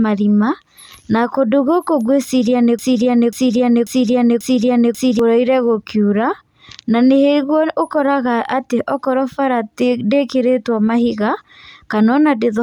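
A speech recording in which playback or streaming likely stalled and kept resending its last buffered fragment, producing a broken-record loop from 2.79 to 5.19 s: a 540 ms piece repeats four times back to back, and the speech that belonged in that stretch is lost.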